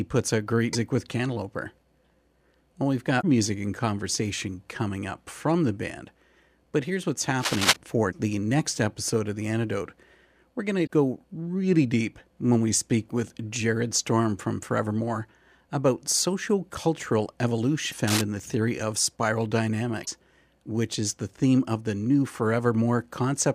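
Damaged data in the compressed stream makes the decoder misread frames and lose sync, hunting for the next header. The speech gets brief chirps or blips at 0.69–0.75, 3.18–3.24 and 10.83–10.89 s. Cable scratch noise, likely from a worn cable or connector whose contact resistance jumps about, adds dense, uneven rustling about as loud as the speech from 7.39 to 7.76 s. Another stream blip follows at 17.88–17.94 s, then a shorter scratch at 18.08–18.24 s, and a final blip at 20.02–20.08 s.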